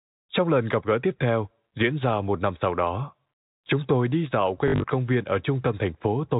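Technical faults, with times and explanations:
4.68–4.84 s, packet loss with last packet repeated: after "chúng tôi đi dạo", looped chunks that fit 20 ms packets buzz near 50 Hz, a quick robotic stutter.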